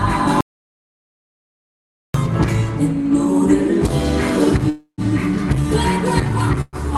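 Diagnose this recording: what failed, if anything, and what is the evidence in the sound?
From 0.41 s to 2.14 s the audio drops out to silence, about 1.74 s of silence with no room tone underneath, cutting in and out mid-flow. That points at the capture end rather than the network: the input most likely went away for a moment, a device disconnect or a stray mute, while the recorder kept writing silence. Whatever happened in that stretch is simply gone, not delayed.

The other two problems are call audio freezes, which is network and jitter-buffer territory. At 4.69 to 5.01 s the sound stalls and gets stretched into a fading buzz for about 284 ms, the last 100 ms or so going silent, then picks up exactly where it left off. At 6.61 to 6.76 s there's a shorter one, about 117 ms, ending in roughly 30 ms of silence. Packets were likely held up in transit, the buffer ran dry and concealment filled the gap, so nothing's lost; the audio just slips later. 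The Opus call path itself, with its band limit around 12 kHz, fits a 32 kbps setting.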